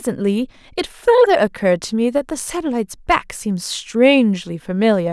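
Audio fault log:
No faults heard anywhere in the speech.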